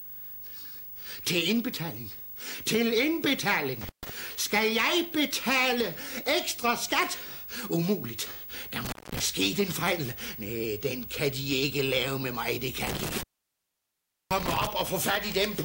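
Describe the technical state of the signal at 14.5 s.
At 14.5 s the signal sits inside an intermittent contact fault running from 12.87 to 14.67 s. A loose cable or plug breaks the circuit, leaving about 1.08 s of open line. The sound drops out with crackle at the break and re-make, and faint hiss fills the gap. That crackling, noisy edge separates it from a digital dropout, which cuts to clean silence with no contact noise around it.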